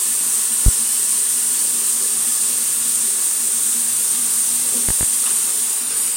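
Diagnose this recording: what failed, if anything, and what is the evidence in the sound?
Loud pops at 0.66–0.70 s, about 15 dB above the sound, and a double pop at 4.89–5.05 s, about 10 dB up, point to analogue wiring, likely a switch or connector adding a voltage step. The sound continues underneath, unlike a dropout.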